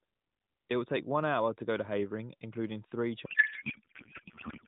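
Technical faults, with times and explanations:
3.26 s to the end at 4.67 s, codec payload misread: the speech turns into garbled noise and warble that barely follows it. That fits octet-aligned AMR frames being unpacked as bandwidth-efficient, so the decoder reads every field from the wrong bits.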